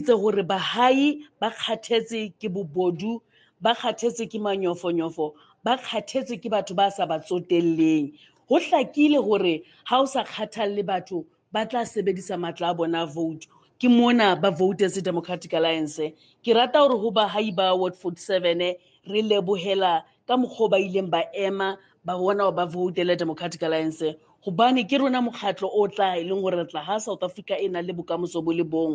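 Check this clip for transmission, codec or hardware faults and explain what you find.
The clip has one kind of fault. The noise suppressor cuts parts of the sound eight times, at 1.28–3.62, 5.34–5.65, 8.28–11.53, 13.46–13.78, 16.13–16.44, 17.95–20.15, 21.79–22.05 and 24.17–24.46 s. The suppressor misjudges these parts as noise and attenuates them by up to about 12 dB, a few hundred milliseconds at a time. The level dips briefly, and sustained or decaying parts sink or end early.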